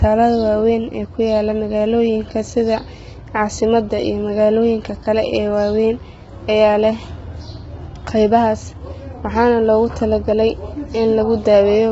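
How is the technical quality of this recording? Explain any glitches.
The recording is heavily degraded by coding damage that runs through the whole speech clip.

Low-delay AAC compression, throughout: this is likely AAC-ELD, the low-delay codec of video calls, squeezed to a very low rate, roughly what 16 kbps would give. Its short frames resolve harmonics poorly, so the voice sounds rough and grainy, noise fills between harmonics, and nothing remains above 7.7 kHz.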